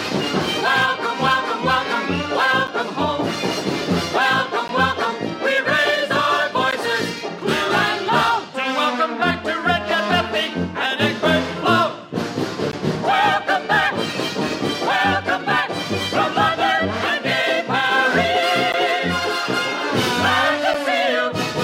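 Gaps between stream segments are the fault here: the time stamps of consecutive 2.0 s segments fail to meet, and the player fills each shortfall with silence. In this audio that produces hard-edged dropouts of roughly 9 to 17 ms at 2.67, 4.68, 6.71, 12.72, 18.72 and 20.74 s, falling on the 2-second segment boundaries though not at every one. Nothing is lost from the stream; it is only pushed later.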